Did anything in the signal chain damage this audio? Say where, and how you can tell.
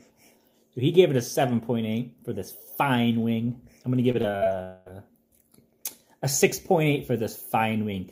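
Yes, the damage happened in the network stage, in two closely spaced events. From 4.11 to 4.47 s the sound turns choppy, with five short holes, the longest about 43 ms, and roughly a third of that stretch replaced by smeared continuation. This is repeated packet loss (robotic sound): packets kept failing to arrive in time, and the receiver filled each gap by stretching the last good audio forward before the next gap arrived.

From 4.63 to 4.88 s the sound gives way to a fading extension of what came just before. It never drops to silence, and when the audio resumes, roughly 220 ms of material is missing. This points to a long network dropout, likely a brief total interruption of incoming packets. The receiver kept synthesising from the last frame for the whole gap, so a fading continuation plays where the real audio should be, and the lost portion is never recovered.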